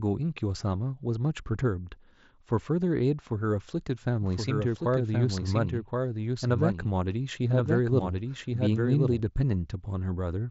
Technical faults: doubled audio track

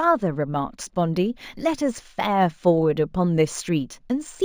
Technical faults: imaging from linear upsampling

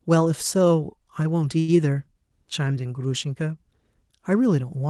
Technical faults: short stall from a late packet

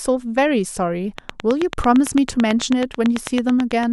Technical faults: train of clicks

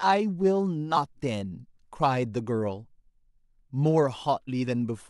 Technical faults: compressed frames skipped

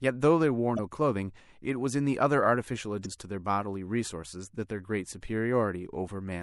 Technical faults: MP3 compression; damaged data in a compressed stream

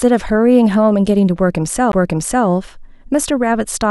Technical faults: CD skip

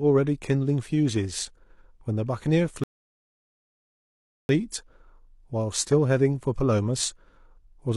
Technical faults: rebuffering stall

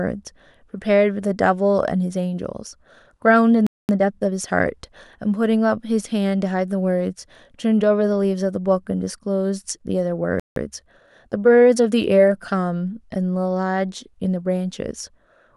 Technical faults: playback stall; time-compressed catch-up

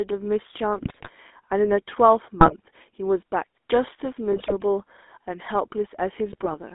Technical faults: GSM full-rate codec; GSM bit errors

